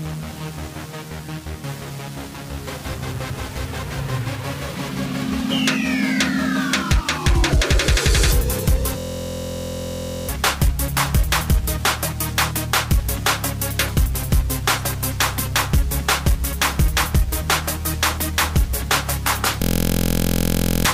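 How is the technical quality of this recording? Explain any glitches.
Two glitches stand out, both the same fault. A system hang loop occurs from 8.99 to 10.29 s and again from 19.62 to 20.85 s. In each, the computer or its audio driver stalled while the sound hardware kept replaying the same 23.22 ms slice of its ring buffer, which fits a 1024-sample buffer. That slice repeats 56 times in the first event and 53 in the second, producing a steady buzz at 43.1 Hz. Each time, about a second and a half of real audio is lost.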